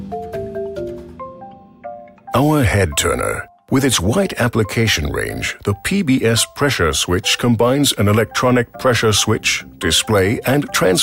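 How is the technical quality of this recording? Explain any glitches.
No glitches can be heard anywhere in the recording. Its technical quality shows no faults worth explaining.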